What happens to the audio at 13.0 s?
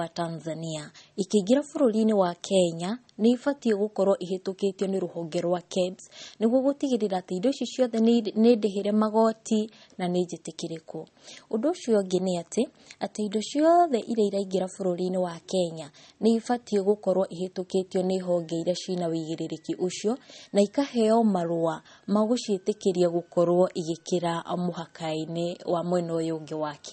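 At 13.0 s the speech carries the same damage heard through the whole recording. It sounds like likely MP3 compression at a low bitrate, around 32 kbps. Nothing is heard above 8.4 kHz, so the treble stops at a hard ceiling and s sounds lose their edge. Weak frequency lines drop in and out from frame to frame. That gives a watery, swirly texture, with metallic chirps on sibilants and smeared attacks.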